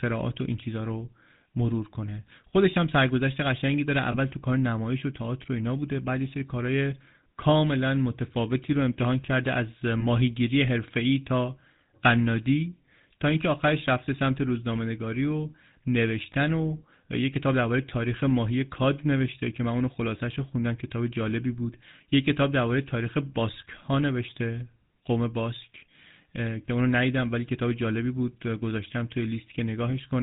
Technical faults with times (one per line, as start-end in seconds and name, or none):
0.00-30.22 GSM full-rate codec
4.12-4.16 lost GSM frames
10.00-10.03 lost GSM frames
26.66-26.69 lost GSM frames